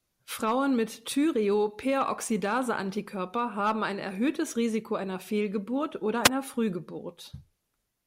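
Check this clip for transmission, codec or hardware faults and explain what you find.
One fault: a wireless microphone squelch dropout from 6.24 to 6.30 s. The FM radio signal fades, hiss rises, and the receiver's squelch mutes the output for about 2.4 ms before the speech returns. That rise of static before the gap marks a radio fade rather than a digital packet loss.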